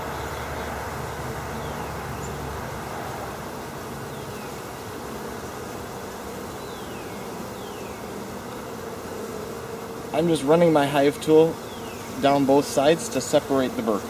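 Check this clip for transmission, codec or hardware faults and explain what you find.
No transmission, codec or hardware faults turn up anywhere in the signal, which holds steady without dropouts, glitches or distortion introduced along the chain.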